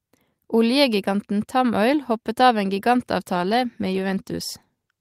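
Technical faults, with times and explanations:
3.33–5.0 s, call bitrate drop: from 3.33 s onward the speech turns coarser and rougher, with a watery, muffled edge, and it stays degraded for the remaining 1.7 s without recovering. The call's bandwidth estimate fell, so the encoder was told to spend far fewer bits. The change in quality fits a fall from about 40 kbps to 16 kbps. At that rate the speech is coded more crudely and the upper frequencies are trimmed away, which dulls the top end.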